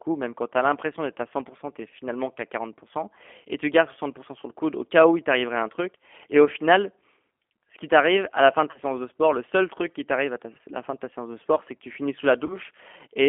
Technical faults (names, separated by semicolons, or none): G.729 codec; VoIP packet loss concealed by the speech codec